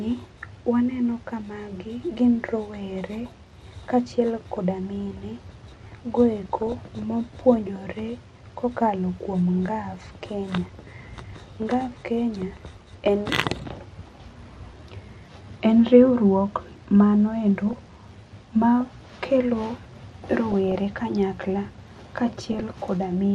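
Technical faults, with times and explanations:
Throughout, MP2 compression: the speech is dull and gurgly, with upper bands flickering in and out. The likely cause is MPEG Layer II coding starved of bits, which fits about 80 kbps.
6.40–6.99 s, 10.50–10.90 s, 12.72–13.08 s, 17.68–18.03 s, 20.52–20.75 s and 22.53–22.76 s, DAB burbling: short blips of noise where bit errors hit single sub-bands and knock their levels around for up to a frame. The first burst ends just before "mopuonjore kokalo kuom", and the fourth starts right after "riwruok mano endo".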